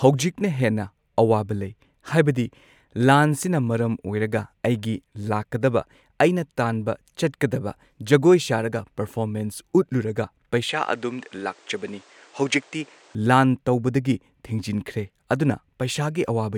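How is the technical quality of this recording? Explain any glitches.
The recording has one clear glitch, a brief switch to a poorer input device. From 10.69 to 13.15 s the capture path likely changed to a different, lower-grade input, which limits the band and adds its own noise. The speech loses everything above about 9.7 kHz and turns duller, and a faint new noise sits well below it. There is no gap at the switch and the level holds steady. Full clarity returns just before "ꯂꯥꯟ ꯇꯧꯕꯗꯒꯤ ꯊꯤꯡꯖꯤꯟꯈ꯭ꯔꯦ ꯑꯗꯨꯅ".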